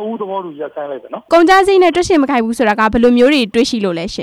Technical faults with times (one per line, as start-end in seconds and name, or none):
0.00-4.22 hard clipping